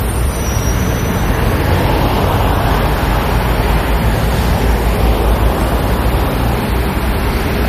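A short recording of everyday sound, with two faults running the whole way through. There's low bit depth with noise shaping: a constant thin hiss, only about 20 dB under the sound, that gets much brighter toward the top. That fits roughly 7-bit audio whose rounding error has been shoved upward in frequency. On top of that, nothing survives above 14.2 kHz, and smeary, warbly artefacts of two different flavours sit together. That's likely transcoding between lossy codecs, something like a low-rate Vorbis encode later re-encoded to MP3 around 48 kbit/s.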